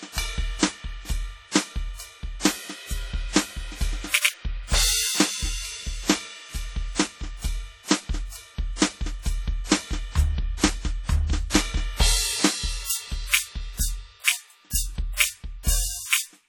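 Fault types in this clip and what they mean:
WMA compression: throughout, the music rings and smears, with a washy hiss that breathes with the signal and quiet detail missing, though content still reaches 19.7 kHz. Likely a transform codec spreading coarse quantisation noise across long blocks, which fits a bitrate around 32 kbps.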